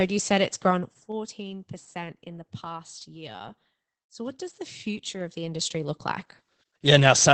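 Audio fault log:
Throughout, Opus voice compression: the speech carries plainly audible codec damage from the SILK linear-prediction coder working in wideband, with nothing above 8.6 kHz. Its coarsely coded excitation, which fits a rate near 12 kbps, leaves the voice muffled, hoarse and slightly robotic.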